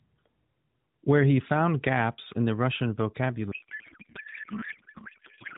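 From 3.52 s until the end of the clip, the speech collapses into garbled noise and warble that barely tracks it. This is a codec payload misread: the AMR frames were packed octet-aligned but unpacked as bandwidth-efficient, so every field is read from the wrong bit positions and the decoder synthesises nonsense. Before that point the AMR narrowband coding, consistent with 12.2 kbps, sounds only lightly coloured and band-limited below 4 kHz.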